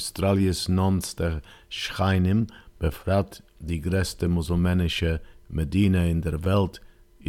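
Nothing stood out as a technical problem on listening to this clip.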